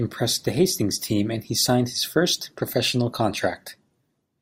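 Nothing stood out on listening to this speech recording.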